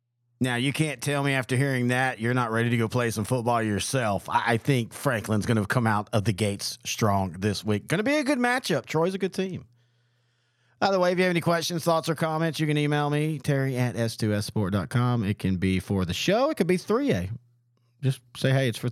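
Nothing in this recording of speech stood out as a technical fault on listening.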